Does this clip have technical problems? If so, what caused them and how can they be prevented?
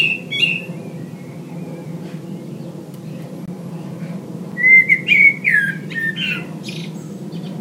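Yes. A block of digital silence cuts in at 3.46 to 3.48 s, a 21 ms hole that fits a 1024-sample buffer, and again at 4.52 s for about 5 ms. The output drops to zero and back with no fade. Keeping the audio thread fed on time, with headroom in buffer size, prevents it.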